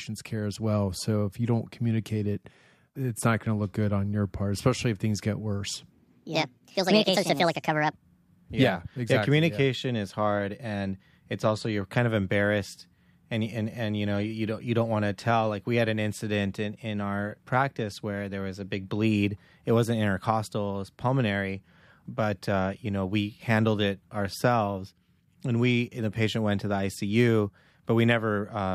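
From 5.92 to 7.93 s, a section at the wrong speed plays 1.41 times fast, likely a clock mismatch, so speech rises about seven semitones and hurries, unlike a pitch shift that keeps timing.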